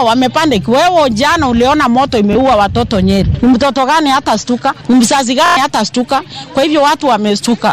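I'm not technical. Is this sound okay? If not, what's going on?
No. This has Bluetooth stutter. At 2.33 to 2.35 s, a tiny slice of sound repeats once. At 5.46 to 5.57 s, it repeats several times in a quick buzz. Data went missing over the wireless link, and the sound jumps ahead.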